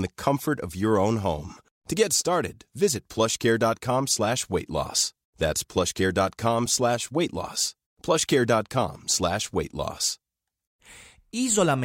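At 6.66 s, just before "slash weight loss", a repeated buffer: a tiny slice, fitting a 64-sample buffer, replays four extra times. It gives a brief buzzy click rather than a gap, since no speech goes missing.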